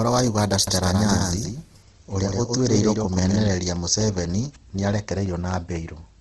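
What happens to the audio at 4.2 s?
A background task is stalling the USB bus or audio driver at a fixed interval, producing periodic USB or driver dropouts from 3.76 s to 5.76 s, so 4.2 s falls inside the run. Every 0.25 s about a millisecond of audio is lost and replaced by silence, around ten gaps in all. Each gap breaks the speech waveform abruptly, heard as an evenly spaced tick or small pop riding on the speech.

Underneath, the same moment carries the coarse texture of a low-rate codec, likely Opus compression in its music mode at a bitrate around 16 kbps. With too few bits, the encoder keeps each band's overall energy but fills the detail with folded or noise-like content. The speech therefore sounds grainy and rough, and the damage is plainly audible. Nothing reaches above about 12.2 kHz, which fits wideband coding.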